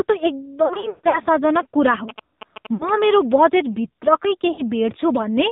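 The whole clip is speech carried through the AMR narrowband mobile codec, at a rate that sounds like 7.4 kbps. Nothing above 4 kHz survives, so the voice is dull and boxed in. At this low bitrate the codec's vocal tract model is fed with very few pulses per frame. The damage is plainly audible: the voice is buzzy, thin and synthetic.

From 0.66 to 1.20 s come lost AMR speech frames. Radio errors spoiled frames, and the decoder filled the gaps by repeating its last good settings at falling gain. About 280 ms of speech is missing, scattered over 480 ms. The longest gap runs 140 ms. The sound stretches, warbles and sinks toward silence, then returns rough.

From 1.94 to 3.05 s, ending just before "मेरो बजेटभित्रकै", GSM signalling bursts break in. A nearby 2G phone is signalling in short radio bursts, and the audio circuit rectifies them. The result is a galloping dit-dit-dit of short buzzes repeating at 216.7 Hz, around 10 dB below the speech.

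Inside that stretch, at 2.74 to 2.90 s, also just before "मेरो बजेटभित्रकै", more frames are lost. About 60 ms goes missing, heard as a brief dip and warble.

At 4.52 to 4.62 s, just after "मेरो बजेटभित्रकै", another 60 ms of frames is lost. The voice dips briefly, wavers, and comes back weak for a moment.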